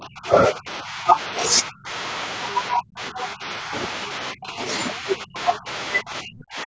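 A speech clip with speech suppressed in double talk throughout. The talker's level dips or vanishes at 0.0–1.17 s, 1.52–1.9 s, 2.74–3.72 s, 4.33–4.61 s, 4.99–5.68 s and 6.02 s to the end. The first drop is mild, about 15 dB. The later ones go much deeper, about 30 to 40 dB, so pieces of speech disappear. The likely cause is an echo canceller hearing both sides at once and turning the talker down along with the echo. There is also the other side's voice leaking through, briefly, at 2.51–2.57 s. It is a faint scrap, about 20 dB below the speech. It is likely loudspeaker sound the echo canceller left in the microphone signal. The call's microphone processing is audible too, with nothing above 8 kHz.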